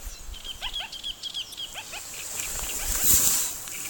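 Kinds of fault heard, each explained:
Damaged data in a compressed stream: a stretch of the encoded file arrives corrupted, so the decoder misreads those frames, loses sync and hunts for the next valid frame header. Here that comes out as a quick glitch from about 1.50 to 1.54 s.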